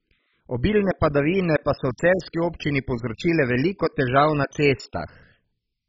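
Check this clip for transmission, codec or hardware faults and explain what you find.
One codec fault runs through the whole speech clip: the damage is likely MP2 compression, with MPEG Layer II's 32 sub-bands starved of bits so upper bands drop out and the rest are coarsely quantised. The sound has nothing above 7.5 kHz, dull and heavily gurgling, which fits a very low bitrate near 16 kbps.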